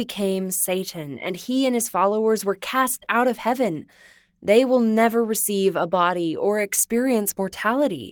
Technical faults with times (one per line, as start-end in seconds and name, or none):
none